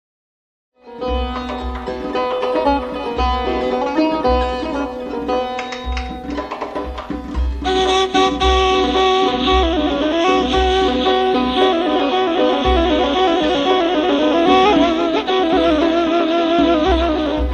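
No technical faults can be heard anywhere in the clip. The opening is a smooth fade-in, rising from silence at about half a second to full level by 1.46 s with no click or hard edge, just as an editor would shape it.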